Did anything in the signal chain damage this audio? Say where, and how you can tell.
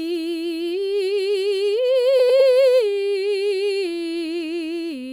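Yes. Frames out of order at 2.19 to 2.40 s, network stage: two adjacent 104.5 ms blocks, fitting four-frame runs, were decoded swapped, fluttering.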